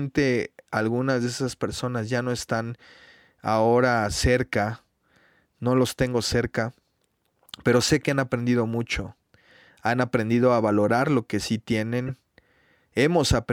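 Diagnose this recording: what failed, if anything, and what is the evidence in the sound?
A brief chirpy burst of noise lands from 12.08 to 12.11 s, right after "valorar lo que sí", peaking around -25 dBFS. This is a corrupt frame decoded at the codec stage: roughly three damaged frames were played anyway, their misread values throwing energy into wrong frequencies.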